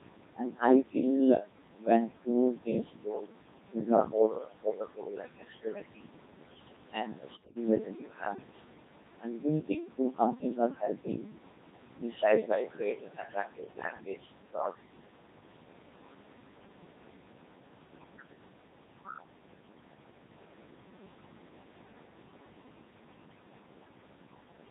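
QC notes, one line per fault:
throughout, noise suppressor artifacts: background noise is pulled down by about 21 dB whenever the suppressor judges a band to be steady noise, so the noise drops away in pauses and swells back under the voice. On a spectrogram the noise floor shows as patchy, blinking speckles that thin out between phrases. The room noise itself sits about 13 dB below the speech.
throughout, Codec 2 vocoder: the voice sounds robotic and buzzy, which fits Codec 2 at 2.4 kbit/s with heavy damage. The decoder rebuilds each frame from pitch, voicing, energy and a coarse spectral envelope as a sum of sine waves, so the original waveform and fine detail are gone. On a spectrogram the harmonics look unnaturally regular and smeared, the formants are blurred and the upper band is thin.
1.44–3.33 s, 3.74–6.17 s, 9.2–11.38 s, 11.97–14.75 s, speech cut by the noise suppressor: in these stretches parts of the speech were mistaken for noise and lowered along with it, by as much as about 20 to 22 dB. 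The affected speech sounds swallowed or faint, totalling roughly 0.7, 1.5, 1 and 1.5 s in the four spans. On the waveform, syllable tails collapse abruptly; on a spectrogram, weak fricative energy goes missing.
7.33–7.56 s, bit errors on digital voice radio: for about a quarter of a second the voice breaks into bleeps and robotic gibberish, jumping in pitch, level and tone colour. The sound points to about eight corrupted vocoder frames at a bit error rate of around 5 percent, where each flipped bit throws off a whole frame's parameters. A spectrogram shows abrupt blocky changes in harmonic spacing and energy from frame to frame.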